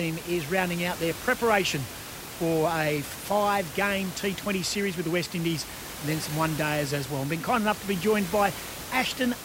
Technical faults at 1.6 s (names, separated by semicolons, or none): none